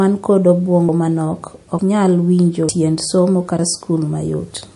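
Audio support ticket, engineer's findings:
MP3 compression, throughout. Plainly audible codec damage: treble stops dead at 11.3 kHz, watery, swirly texture on sibilants, smeared consonant onsets. Likely cause: MP3 encoding starved of bits, consistent with a low bitrate around 48 kbps. Unlike a plain low-pass filter, the damage shifts from frame to frame as weak frequency lines drop in and out, so the sibilants chirp and warble instead of just sounding dull.

Audio missing between chunks at 0.89 s, 1.79 s, 2.69 s and 3.59 s. Skips spaced evenly about 0.9 s apart, each dropping roughly a tenth of a second with no gap left behind. Landmarks: after "ma nok" before "nyal winjo tiend somo"; between "nyal winjo" and "tiend somo"; after "nyal winjo tiend somo". Likely cause: recorder or processor losing audio at handover between 1 s chunks. Unlike packet-loss dropouts, the timing is strictly periodic and nothing is concealed or filled.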